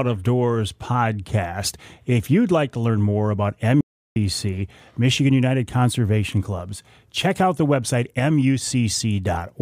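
Audio dropout to silence runs from 3.81 to 4.16 s, cutting the speech off abruptly and bringing it back just as suddenly about 0.35 s later. The gap is dead digital silence, with no room tone or background noise underneath. The input signal was likely lost briefly, through a momentary disconnection or mute, while recording carried on writing silence. Whatever was said during that third of a second is simply missing.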